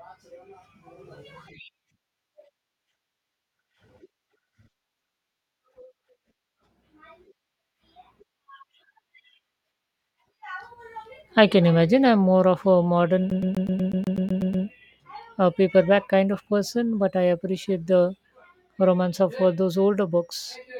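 At 13.3 s, right after "I'm more of a", the speech locks into a CD stuck on one turn until 14.66 s. A scratch keeps throwing the laser back to the same point, so one 123.4 ms slice replays 11 times, a rapid, even stutter about eight times per second with a brief mute at each jump. On a waveform the slice repeats as identical blocks separated by thin gaps; a spectrogram shows the same short pattern tiled across that span.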